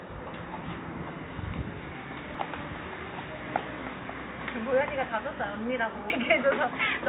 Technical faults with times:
2.35 damaged data in a compressed stream
6.10 damaged data in a compressed stream

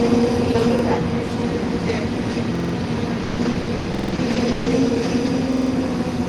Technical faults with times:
0.79-0.84 repeated buffer
2.55-2.74 repeated buffer
3.23-4.68 repeated packet loss (robotic sound)
3.95-4.13 repeated buffer
5.53-5.71 repeated buffer

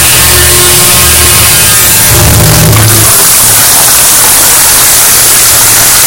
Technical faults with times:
0.00-6.06 float read as integer

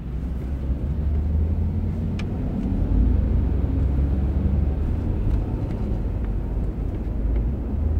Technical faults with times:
0.00-8.00 clock drift between sender and receiver
0.54-7.95 repeated timing corrections

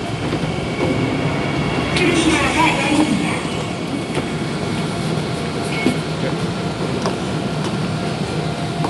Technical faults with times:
none

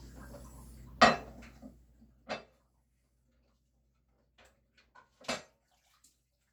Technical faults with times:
none

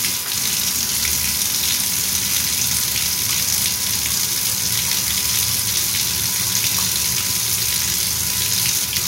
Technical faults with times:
0.00-9.07 USB whine

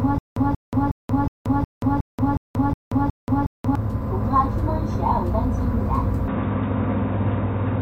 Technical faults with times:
0.00-3.75 stutter with silent gaps
6.28-7.82 input switched to a poorer device

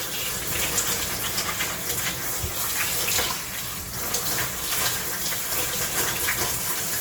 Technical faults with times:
0.00-7.00 Opus compression

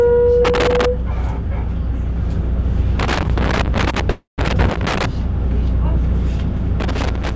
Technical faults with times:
0.45-0.85 loose connector crackle
2.99-5.05 loose connector crackle
4.10-4.40 call audio freeze
6.80-7.36 loose connector crackle

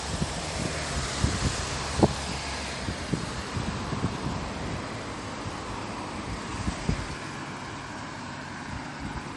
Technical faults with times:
0.00-9.36 MP3 compression

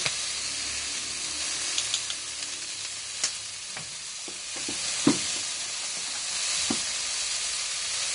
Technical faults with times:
0.00-8.14 Vorbis compression

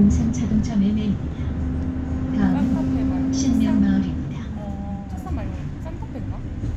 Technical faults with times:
none

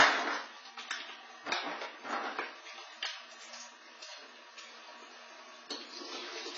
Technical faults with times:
0.00-6.58 AAC compression

